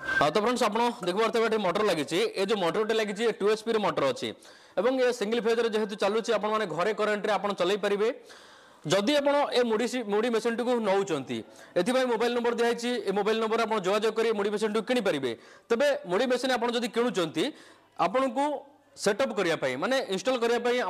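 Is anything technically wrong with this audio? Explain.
No, no technical faults are present.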